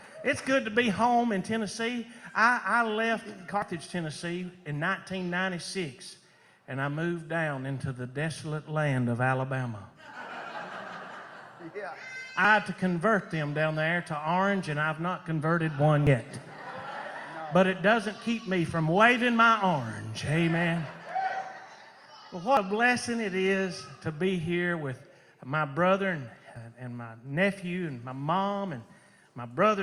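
Five abrupt jumps forward in the audio, at 3.62, 12.45, 16.07, 22.57 and 26.56 s, point to dropped buffers (overrun), likely from samples not being collected in time. About a tenth of a second vanishes each time, roughly three tenths at 12.45 s. No silent gap appears, unlike an underrun.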